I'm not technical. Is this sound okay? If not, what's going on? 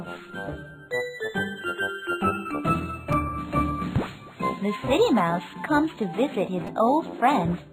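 No. There are two brief clicks, one at about 3.13 s and one at about 6.67 s. Both are a fault called a repeated buffer. The playback device works through the sound in small pieces, here about 5 ms each. When the next piece arrived late, it replayed the last one, twice more at 3.13 s and three times more at 6.67 s. With pieces that short, the repeats join into a tiny buzzing click rather than an audible stutter. No sound appears to be missing.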